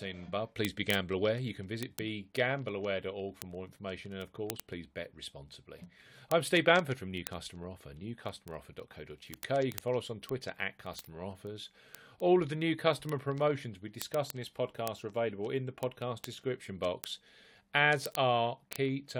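From 0.11 s to 19.17 s, word clock ticks recur roughly every 30 ms: an unlocked receiving clock, off by roughly 700 ppm, drops or repeats single samples.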